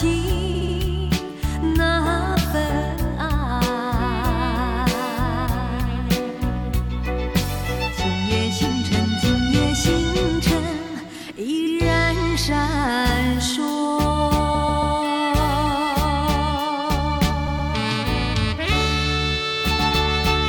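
Repeated frames cause stutters at 0.54–0.75 s, 11.66–11.75 s, 14.54–14.96 s and 17.46–17.70 s. Compressed blocks of 70–139 ms replay up to three times.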